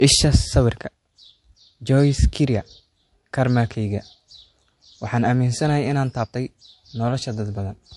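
Throughout the speech, nothing sounds above 11.3 kHz, and the speech carries the smeared, swirly artefacts of a lossy codec. The likely cause is low-bitrate audio saved at a high bitrate: a roughly 52 kbit/s MP3 re-encoded at 192 kbit/s. A spectrogram shows a flat ceiling at that frequency.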